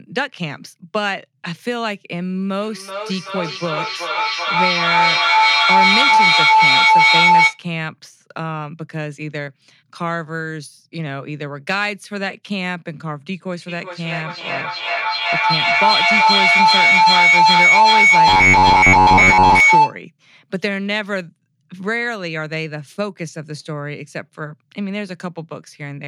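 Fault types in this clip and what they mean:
Feedback howl, 2.61 to 7.63 s and 13.68 to 20.0 s: a microphone and loudspeaker in the same room form a loop that gains level on each pass, so a tone near 1 kHz builds, pulsing roughly every 0.4 s and peaking about 11 dB above the speech.
Robotic sound from repeated short buffers, 18.28 to 19.60 s: the speech turns into a rigid, metallic buzz at 93.8 Hz, likely because audio arrives too seldom and a slice of about 10.7 ms is replayed in place of most of the real signal.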